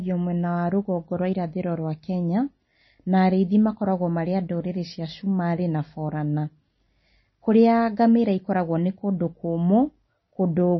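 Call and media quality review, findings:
MP3 compression throughout, likely a bit-starved encoder; damage fits roughly 24 kbps. Treble cut flat at 5.9 kHz, weak frequency lines switching on and off frame to frame: heavy watery swirl, metallic chirps on s sounds, smeared consonant onsets.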